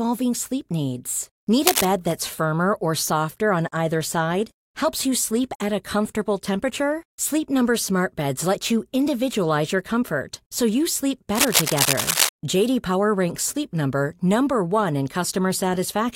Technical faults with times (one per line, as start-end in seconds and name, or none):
1.66-1.85 cable scratch noise
11.35-12.29 cable scratch noise